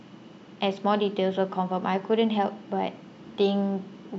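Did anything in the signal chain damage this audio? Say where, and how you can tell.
No, nothing along the chain seems to have left a mark on this one; it all sounds just as it should.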